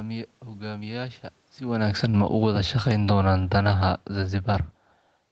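From 1.63 s to 4.74 s, automatic gain falling pulls the level down by about 8 dB. The gain control judged the input too loud or its background noise too strong and eased its gain back gradually. The speech and the room noise behind it sink together.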